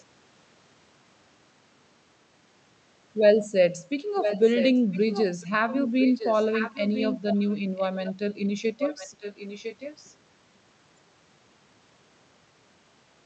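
This is speech heard over a call. From 4.2 to 8.47 s, a delayed copy of the speech returns about 1.0 s behind the original. It is only slightly quieter than the talker. It returns from 8.79 to 10.15 s at the same 1.0 s delay, now much fainter. This is an echo leak. The likely cause is a far-end loudspeaker whose echo canceller failed to remove its own playback before sending it back.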